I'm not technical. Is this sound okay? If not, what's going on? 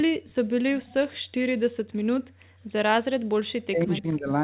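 No, there are a couple of problems. The first is the background gated by the echo canceller. The echo canceller is the part of a call that stops the other person hearing themselves back. Here it clamped the microphone down hard, so the room sound suddenly drops away from 1.21 to 1.32 seconds and again from 2.3 to 2.62 seconds. Each time it pops back once the canceller relaxes, which gives a brief, gappy feel.

The second starts at 3.62 seconds and runs to the end at about 4.4 seconds. The talker gets pushed down and chopped into pieces, adding up to around half a second of lost sound. That pattern points to speech suppressed in double talk, likely because both sides spoke at once and the echo canceller couldn't tell the local talker apart from the loudspeaker echo, so it turned everything down together. There's also a narrow, phone-like quality throughout, since the call's codec leaves nothing above 4 kHz.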